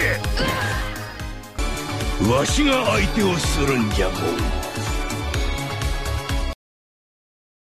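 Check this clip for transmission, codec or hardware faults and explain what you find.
There is one fault, a cut-off end. At 6.53 s the sound stops abruptly mid-event and the rest of the clip is digital silence. The final buffers were never written or played out, so nothing decays. The waveform falls straight to a flat line, and the spectrogram shows every frequency ending together at a hard vertical edge, followed by about 1.2 s of empty black.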